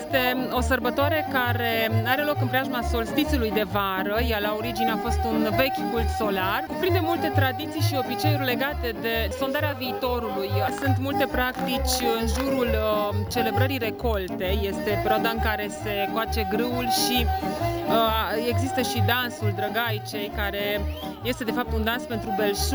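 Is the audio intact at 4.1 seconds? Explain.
No. At 4.1 seconds, as across the whole clip, there is imaging from sample-and-hold upsampling. The sound appears to have been raised from 16 kHz to 48 kHz by repeating each sample with no smoothing filter, so a mirrored copy of the spectrum fills 8 to 16 kHz at about 18 dB below the signal. It is heard as a bright metallic fizz that tracks the level. A spectrogram shows an inverted mirror of the content above 8 kHz, and the waveform shows small stair-steps.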